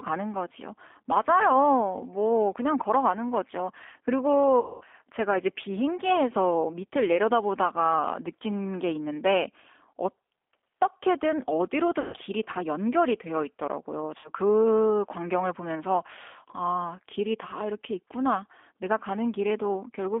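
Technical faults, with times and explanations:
Throughout, G.729 codec: The speech travelled through a low-rate CELP coder, which fits an 8 kbit/s G.729A stream. It does not send the waveform. Each frame is rebuilt from a vocal tract filter, a pitch predictor and a few pulses, and the line is limited to 250 Hz to 3.5 kHz. The result is thin, band-limited speech with a plainly audible rough, synthetic edge, where breathiness and fine detail are swapped for a buzzy approximation.
4.60–4.84 s, 12.01–12.16 s and 14.18–14.29 s, VoIP packet loss concealed by the speech codec: Packet bursts of about 210 ms, 120 ms and 60 ms went missing, and the decoder filled each gap by repeating its last pitch and filter settings at falling gain. Each gap therefore sounds like the speech stretched into a buzzy tone or coloured noise that fades out, longest at 4.60 s. Because the codec builds each frame on the previous one, the speech stays weak and smeared for a short while after each gap.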